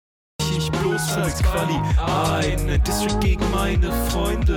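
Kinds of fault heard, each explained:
Cut-off start: The capture began late, so the sound enters already in progress. The clip opens with digital silence until 0.40 s. Then the audio appears abruptly, with no natural attack or fade-in, as though joined midway through a sound.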